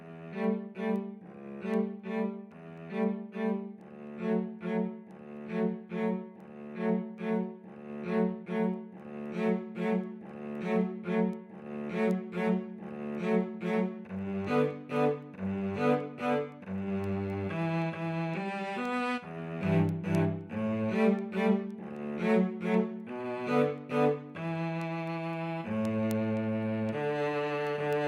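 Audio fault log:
0.18–27.93 s, word clock ticks: sharp ticks about every 0.3 s as an unlocked receiving clock drifts roughly 70 ppm, dropping or repeating single samples.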